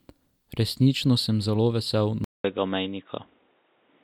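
At 2.24 s the speech cuts out for about 200 ms. When it returns, it sounds dull and boxy through to the end. Nothing reaches above 3.8 kHz. A new background noise sits about 40 dB below the speech. The loudness stays roughly the same. This is likely an input switched to a poorer device, such as another microphone or a headset's call profile. That device passes a narrower band and adds its own tone and noise.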